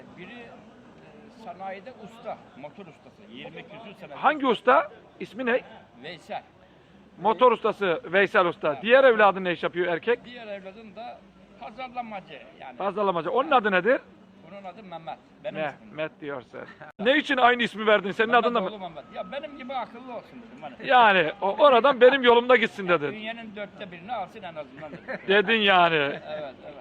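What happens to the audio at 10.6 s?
Nothing goes wrong at 10.6 s; the audio plays through that moment without any dropout, click, glitch or other audible fault.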